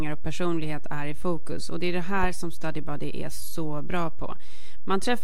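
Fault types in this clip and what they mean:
DC offset: Something in the recording or conversion chain added a constant bias, so the whole speech waveform sits off the zero line for the full length of the clip, shifted by about -18 dBFS. The shift itself is inaudible, but it wastes headroom, bringing clipping closer on loud peaks. It also shows up as a steady lump of energy at 0 Hz, at the very bottom of the spectrum. Cuts or edits can click where the offset jumps.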